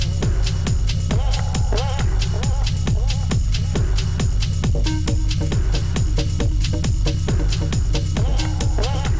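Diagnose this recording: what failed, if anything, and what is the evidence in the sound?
Nothing failed; no faults detected.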